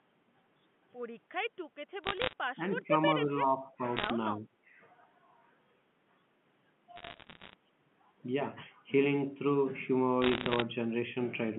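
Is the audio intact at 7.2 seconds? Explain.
No. Bit errors on a digital phone line affect 6.96 to 7.54 s. Flipped bits in the A-law telephone coding each corrupt single samples, and hits on sign or high-order bits produce sharp ticks. At an error rate of somewhat under 1%, this is audible as crackle over otherwise unchanged speech.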